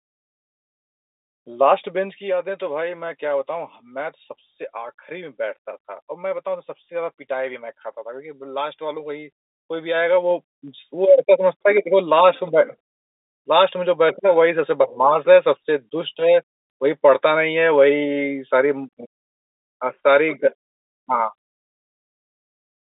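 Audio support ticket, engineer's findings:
Zipper noise, 1.76–2.36 s and 9.48–10.82 s. Gain applied in unsmoothed 2 dB steps, each step ticking. Level drops about 10 dB, then rises about 10 dB.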